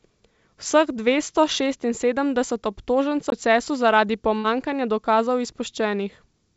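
Speech, carried over what sounds like a call path that tops out at 8 kHz, which fits G.722 at around 64 kbps. At 3.30 s there's a CD skip: a knock or a flaw sent the laser onto a different turn of the spiral, so you hear a very brief mute of roughly 20 ms, and then the sound picks up from a different point on the disc. A second fault follows at 4.38 to 4.46 s, a burst of packet loss. The receiver bridged the first 55 ms by stretching out the last bit of sound it had and fading it down, which gives that smeared, held quality, and then it jumped ahead with about 60 ms of the original simply gone.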